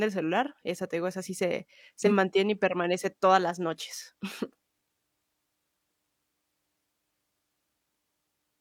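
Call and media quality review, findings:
AAC frame loss with concealment at 2.00–2.12 s, between "digo esa sí se" and "mantiene y permanece todas". Short smeared, noisy patch; gap of about 43 ms fits one lost frame. Decoder repeats last good spectrum with scrambled phase. Spectrogram: blurred, flattened harmonics, noise-like fill. Waveform: no dropout, only a brief loss of periodic detail.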